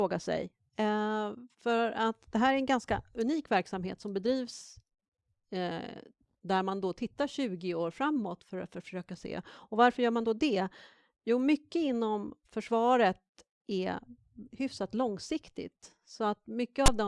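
At 16.86 to 16.88 s, file tags played as audio: a block of text tags is decoded as samples, producing a brief, loud, offset rasp with abrupt edges.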